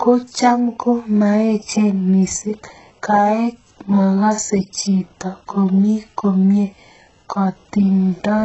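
Across the whole speech clip, heavy damage points to HE-AAC compression at a very low rate, around 8 kbps, as the likely cause. Replicated treble sounds gritty and lispy on s sounds, and a spectrogram shows copied, smeared upper bands stopping dead at 8 kHz.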